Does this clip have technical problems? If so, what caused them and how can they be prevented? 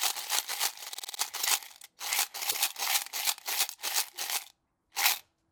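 Yes. The audio has repeated frames. From 0.93 to 1.19 s, a 52 ms block plays five extra times, a rapid mechanical stutter that adds about 261 ms. From 2.50 to 2.63 s, a 131 ms block plays once more, adding another 131 ms. Each time, the same stretch of compressed audio was written or sent again. The repeats are identical copies, which distinguishes this from a dropout, where sound is lost rather than replayed. Prevent it by checking frame sequence numbers and discarding duplicate frames before decoding.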